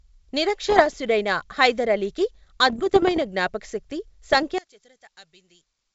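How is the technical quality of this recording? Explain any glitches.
The recording has two kinds of glitches: three stretches of crackly corruption and a sudden collapse near the end, all over what sounds like a G.722 wideband call.

Bit errors on an ADPCM link hit at 0.69–0.94 s, 2.67–3.22 s (just after "హైదర్ అలీకి"), and 4.31–4.39 s. Flipped bits throw off the decoder's step size and predictor, so each error rings on briefly as pops, rough bursts and jumpy level. The first patch is the roughest, with an error rate of around one percent. The other two are lighter, closer to half that.

From 4.58 s to the end, the speech drops by about 25 dB and goes faint. That's most likely one channel inverted: with one side's polarity flipped, summing to mono cancels everything common to both channels and leaves only a weak difference signal.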